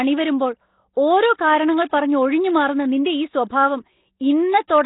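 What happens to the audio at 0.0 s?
From the very first moment the speech carries Nellymoser compression, and it never lets up for the whole clip. The sound is rough and hissy, with a smeared, underwater quality, and nothing comes through above about 3.9 kHz. The likely cause is the old Flash microphone codec packing each short block into a fixed, tiny bit budget, which fits a rate around 16 kbps. Weaker bands get starved and filled in with noise, hence that grainy halo.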